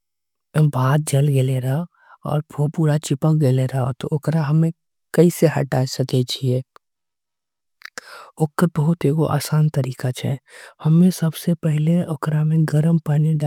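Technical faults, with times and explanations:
No technical faults can be heard, so there are no times or explanations to give.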